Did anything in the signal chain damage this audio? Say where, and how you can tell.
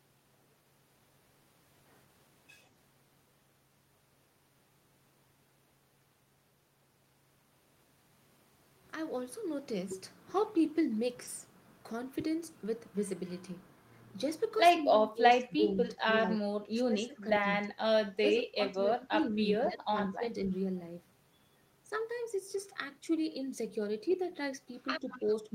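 Yes. The damage happened in call processing. The fault is speech suppressed in double talk. From 14.74 to 19.12 s, the speech dips in pieces, by about 15 dB at worst, for roughly two seconds in total. From 19.59 to 20.23 s it drops harder, by about 20 dB. At 25.01 to 25.09 s there is a brief dip of about 5 dB. The likely cause is an echo canceller facing both sides talking at once. It turned down the local talker along with the echo.

Echo leak is also present. At 20.44 to 20.48 s and again at 24.10 to 24.16 s, a faint delayed copy of the speech appears. It trails by 115 ms and sits about 25 dB below the speech. Both scraps are short. This likely comes from a loudspeaker on one side of the call. Its canceller left some residue, and that residue was sent back down the line.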